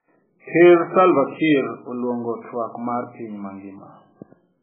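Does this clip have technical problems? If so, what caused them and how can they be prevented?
Yes. Heavy MP3 compression damage runs through the whole speech clip. Nothing survives above 3.7 kHz, and the remaining sound is watery and swirling, with smeared consonant onsets. This is likely from an MP3 encode at a very low bitrate, around 8 kbps, where the encoder cut the treble and dropped weak frequency lines that flicker between frames. A simple low-pass filter would dull the sound without that shifting, bubbly texture. Encoding at a much higher bitrate, or with a lossless format, prevents it.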